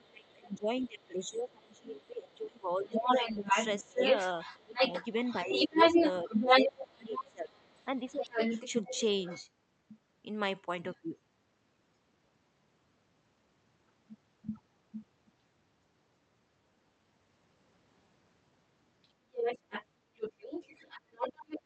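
Speech suppressed in double talk runs from 0.0 to 8.39 s. The talker dips by up to about 25 dB for roughly five seconds in total, likely because the echo canceller turned down both sides at once. The other side's voice leaking through overlaps it from 0.26 to 9.43 s, somewhat louder than the talker, likely because loudspeaker echo was only partly cancelled. It returns, softer than the talker, from 19.03 s to the end.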